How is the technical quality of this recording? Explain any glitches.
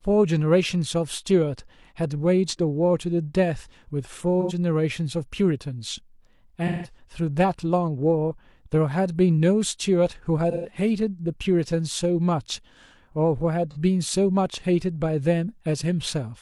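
The speech has four brief dropouts from AAC frame loss with concealment. The decoder patched the missing frames by reusing the last good spectrum. Each one sounds like a smeared, noisy or phasey patch.

At 4.40 s, a gap of about 85 ms is concealed briefly, which fits two lost frames.

At 6.67 s, about 171 ms is replaced by a longer concealed patch. That fits four lost frames.

At 10.51 s, about 128 ms is concealed, consistent with three lost frames.

At 13.71 s, a 43 ms blip fits a single lost frame.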